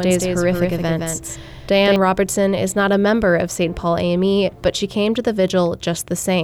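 From the very start until about 1.96 s there's a doubled audio track: a second copy trails roughly 150 ms behind, a few dB quieter, dry and full-band, then cuts off abruptly. Likely a second, slower capture path getting mixed in.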